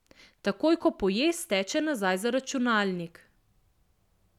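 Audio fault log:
No faults detected.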